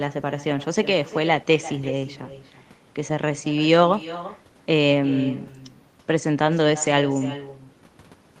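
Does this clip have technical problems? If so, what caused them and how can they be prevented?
Yes. Throughout the speech, each phrase is shadowed roughly a third of a second later by a thinner copy about 15 dB quieter. This is echo with no canceller: the far end's loudspeaker feeds its microphone, returning the voice over the call path. Enabling acoustic echo cancellation at the far end, or having that participant use headphones, prevents it.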